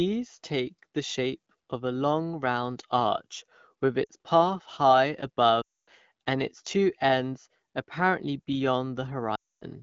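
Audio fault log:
4.04 to 4.11 s, lost AMR speech frames: after "long round arch with", about 60 ms of speech fails its radio checksum, which fits three 20 ms frames. The AMR-WB decoder fills the gap by repeating its last good pitch and vocal tract settings at falling gain, so the sound drops to near silence within two frames before "path high".
5.62 to 5.90 s, lost AMR speech frames: a 260 ms run after "path high". The repeated settings drop the sound to near silence within two frames, well before the run ends, because wideband concealment decays quickly. The voice returns weak or rough for a moment at "and its two ends".
9.35 to 9.64 s, lost AMR speech frames: another 260 ms run. It has the same quick drop to near silence and a brief weak or rough recovery.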